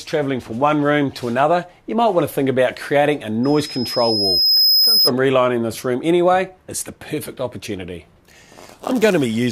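At 3.43 s a loudspeaker feedback squeal begins: a microphone is picking up the loudspeaker it feeds, and at 5.1 kHz the loop gain rises above one, so that frequency feeds on itself. The tone swells over roughly one and a half seconds to around 5 dB above the rest of the sound, then stops at 5.11 s. A spectrogram shows one thin horizontal line at 5.1 kHz brightening steadily, and the waveform envelope grows across that span.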